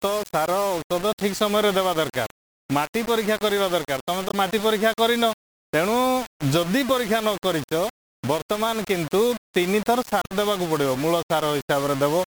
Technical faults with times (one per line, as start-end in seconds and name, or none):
0.00-12.35 low bit depth without dither
4.28-4.34 damaged data in a compressed stream
10.20-10.31 damaged data in a compressed stream